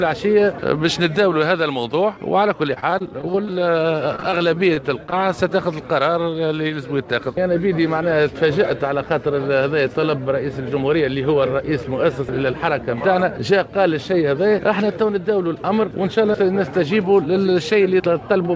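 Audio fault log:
2.74–3.57 s, repeated packet loss (robotic sound): nine gaps were lost or late, none longer than 23 ms, and about 17% of the stretch was patched by extending the last sound. The result is choppy audio with pieces missing.
3.51–3.82 s, jitter buffer slow-down: the buffer ran low or had just raised its target delay, so the receiver repeated pitch periods and added 35 ms. Playback drops to 90% speed, and the sound drags at unchanged pitch.
4.16–5.14 s, repeated packet loss (robotic sound): seven gaps, the longest 26 ms, were concealed, covering about 14% of the span. The sound turns broken again.
6.68–6.72 s, short concealed packet loss: about 20 ms never reached the decoder and was filled by continuing the preceding sound, which leaves a brief smear.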